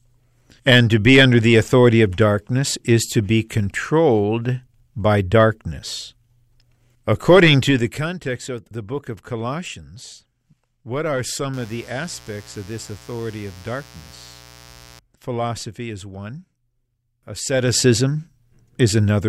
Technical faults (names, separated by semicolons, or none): zipper noise